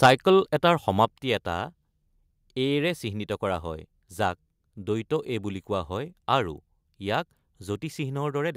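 From 0.02 to 0.1 s, microphone overload flattens the loudest peaks with a harsh crackle, likely from input driven about 8 dB past full scale. Microphone volume stepped down at 0.06 s and again at 1.05 s, dropping the level suddenly by about 3 dB, then about 5 dB, likely automatic gain correction reacting to clipping.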